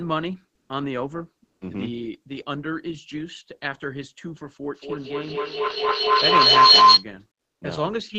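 Speech clip, and two things stand out. At 0.55 to 0.67 s and again at 1.45 to 1.57 s, about 120 ms each time, the real background drops out and is replaced by a flat, featureless hiss. That's comfort noise in place of the background, likely from discontinuous transmission in the codec, which fits Opus DTX. The first patch sits about 9 dB quieter than the room, and the second matches its level. Then from 4.74 to 7.1 s a feedback howl builds up around 1 kHz, pulsing about every fifth of a second as the mic-to-speaker loop keeps adding gain. It peaks about 14 dB above the speech. The top end stops at 8 kHz, consistent with an Opus call path at around 20 kbps.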